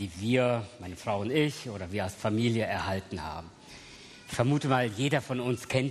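No technical faults can be heard anywhere in the clip. Nothing breaks, drops out or distorts at any point.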